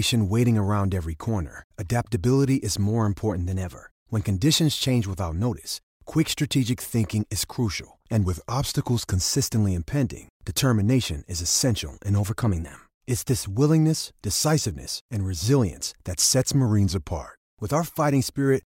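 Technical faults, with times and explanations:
3.46–3.98 s, 8.22–9.17 s, 12.19–12.74 s and 16.66–17.34 s, drift correction steps. Speed and pitch jump together: 6.3% fast, a semitone sharp, then 6.3% slow, a semitone flat, alternating. Each snaps back. Likely a clock-matching resampler stepping its rate to manage its buffer.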